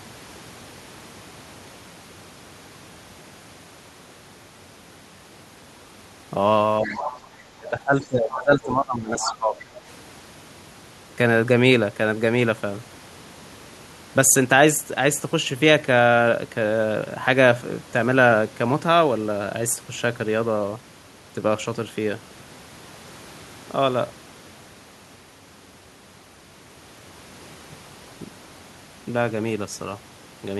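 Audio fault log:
6.81–7.10 s: speech suppressed in double talk. The speech dips by roughly 10 dB for about 0.3 s. Likely the echo canceller ducking both directions while both sides talked.
6.85–7.20 s: other side's voice leaking through. A second voice sits about 10 dB under the speech. Likely loudspeaker echo the canceller did not fully remove.
7.53–9.68 s: speech suppressed in double talk. The speech drops in patches, at worst by about 15 dB, for around 2 s in total. Likely the canceller again turning down both sides during overlap.
8.02–8.06 s and 9.20–9.34 s: other side's voice leaking through. A faint scrap about 25 dB down, then a clearer one about 10 dB down. Likely residual loudspeaker echo slipping past the canceller.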